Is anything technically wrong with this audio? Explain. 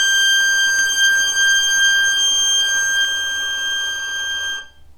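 Yes. From 0.79 to 3.05 s there is a doubled audio track: a dry, full-band copy about 5 dB quieter trails by roughly 0.7 s, likely from a slower second capture path, and cuts in and out abruptly.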